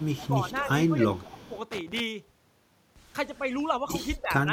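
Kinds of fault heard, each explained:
Echo leak: A faint copy of the speech returns 301 ms late, roughly 20 to 25 dB quieter. It is heard from 0.0 to 0.27 s, 0.53 to 0.68 s and 1.25 to 1.59 s. Likely a far-end echo canceller let loudspeaker pickup through.
Speech suppressed in double talk: The speech sinks in level in short patches within 0.28 to 0.66 s, 0.89 to 1.55 s and 3.39 to 4.52 s. The deepest dip, near 20 dB, falls in the middle stretch. Likely an echo canceller turned this talker down during overlap.
Loose connector crackle: A ragged burst of crackle and scratching runs from 1.72 to 2.00 s. A worn or dirty contact makes and breaks the circuit rapidly. That chops the signal into fragments.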